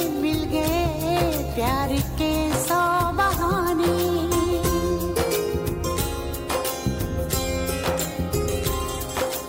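No technical faults can be heard anywhere in the audio.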